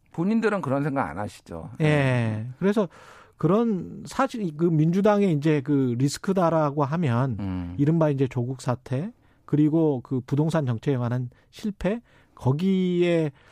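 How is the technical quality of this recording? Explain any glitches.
The recording has one glitch, a repeated buffer from 10.08 to 10.10 s. About 23 ms of audio plays twice because fresh data arrived late, which fits a 1024-sample buffer. It sounds like a brief stutter with a hard join at the repeat. On a waveform the block visibly repeats, and a spectrogram shows a thin vertical line at the seam.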